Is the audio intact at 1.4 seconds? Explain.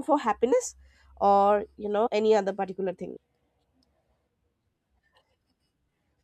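Yes, the audio at 1.4 s is intact, with no dropout, click, distortion or other fault audible at that moment.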